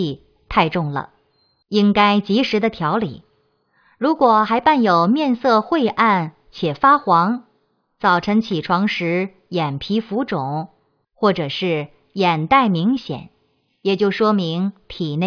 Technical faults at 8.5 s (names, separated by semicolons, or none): none